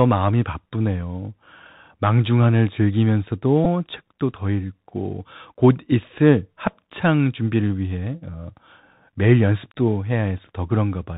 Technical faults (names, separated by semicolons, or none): Bluetooth CVSD headset codec; Bluetooth headset packet repeated